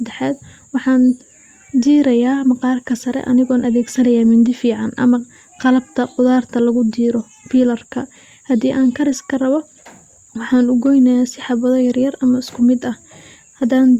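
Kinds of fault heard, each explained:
No faults detected anywhere in the speech recording.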